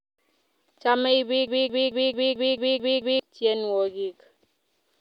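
Speech with a broken-record loop: a stalled player or stream likely kept resending its last 220 ms fragment, repeating it eight times back to back from 1.48 to 3.2 s and losing the speech meant for that span.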